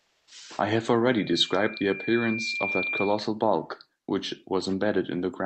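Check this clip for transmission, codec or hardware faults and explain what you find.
Three faults are audible in this speech clip: synthetic background at the start, a clipped first onset, and a feedback squeal.

From 0.0 to 0.31 s, comfort noise in place of the background: the receiver likely filled a discontinuous-transmission pause with steady, featureless noise, about 1 dB quieter than the real background.

At 0.28 to 0.31 s, an onset clipped by the voice detector: the sender likely noticed sound late, so 30 ms went unsent and the speech begins abruptly.

From 1.18 to 3.27 s, a loudspeaker feedback squeal: the microphone re-captures its loudspeaker, and a 2.4 kHz tone swells over roughly one and a half seconds to about speech level. The call codec's band limit near 8 kHz sits well above this tone.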